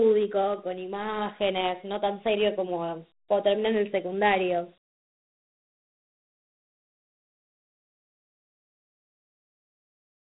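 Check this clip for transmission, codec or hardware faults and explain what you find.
There's one fault, and it runs through the whole clip: Dialogic VOX ADPCM coding. The sound stops dead at about 3.9 kHz, which points to 8 kHz sampling, and the 4-bit steps fit a 32 kbps stream. Each sample is stored only as a coarse step from a prediction, so the coder keeps trailing and overshooting. That error comes out as a gritty hiss riding along with the speech, and it's plainly audible throughout.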